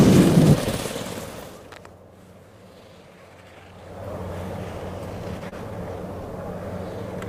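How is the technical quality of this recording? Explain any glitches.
The recording has one glitch, a short stall from a late packet, from 5.49 to 5.54 s. A packet arrived late, the jitter buffer ran dry, and the receiver held the last sound for about 32 ms until it came, then resumed where it stopped. Nothing is lost, but that moment drags briefly with a faint buzz or dip, and everything afterwards plays 32 ms later.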